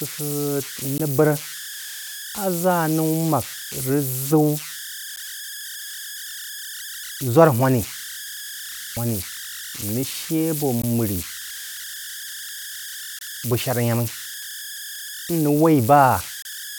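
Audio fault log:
Throughout: converter idle tones. A tone of around 1.5 kHz sits in the pauses, with grainy noise under quiet speech, about 12 dB below the signal. An undithered delta-sigma converter given low-level input settles into repeating bit patterns, and these patterns produce the tone.
0.98 s, 5.16 s, 10.82 s, 13.19–13.21 s, 16.42–16.45 s: gap at a join of encoded pieces. Short silences of 11.8 to 30.0 ms break the continuous speech with smeared edges, and the sound then resumes. Separately encoded segments were joined without trimming their start delay and end padding.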